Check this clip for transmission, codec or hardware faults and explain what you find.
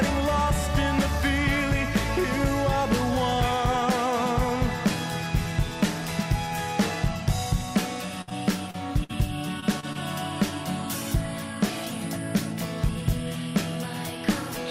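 The clip has transmission faults: a cluster of packet losses between about 8.2 and 10.0 s.

Burst of packet loss at 8.21–8.29 s and 9.04–9.12 s: about 60 ms missing each time; the receiver extends the last sound and fades it, leaving a held buzz or hiss before the audio skips ahead.

Short concealed packet loss at 8.29–8.33, 8.71–8.76, 9.60–9.64, 9.80–9.85 and 9.93–9.97 s: 20–40 ms gaps filled by continuation and crossfaded back, heard as brief smears or wobbles.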